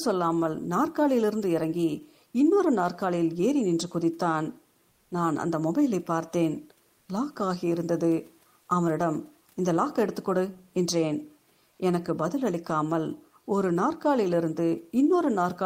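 A speech clip with room noise sitting about 42 dB below the voice, and from 4.93 to 5.11 s, a 180 ms stretch where that real background gives way to a smooth, featureless hiss about 1 dB quieter. This is comfort noise in place of the background, likely from discontinuous transmission of the kind Opus DTX uses: the sender stopped sending audio during the pause, and the receiver filled the gap with synthetic noise.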